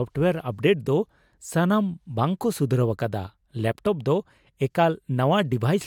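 No technical faults are audible.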